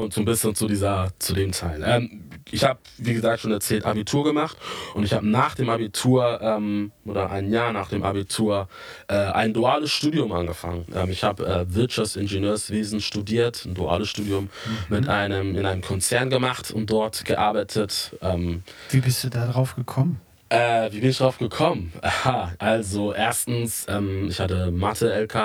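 Throughout the speech, channel delay (comb filtering): one channel trails the other by around 20 ms before the mono sum, so shared content cancels at regularly spaced frequencies from near 20 Hz upward. It sounds rough and slightly doubled, and a spectrogram shows fixed, evenly spaced horizontal notch stripes.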